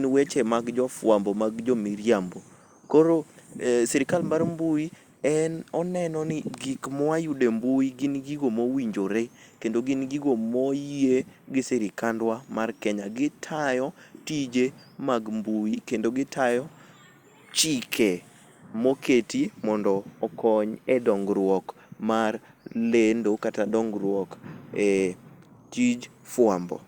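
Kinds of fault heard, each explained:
No faults heard in this clip.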